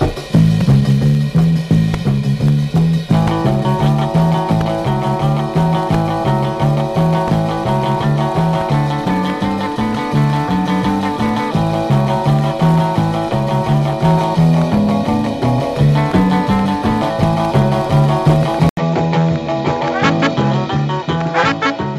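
At 18.69 s there's an 80 ms gap, then the sound comes back duller and a bit quieter, with nothing above 7.6 kHz and a new noise floor well below it. That's likely the input switched to a poorer device, and it stays that way to the end.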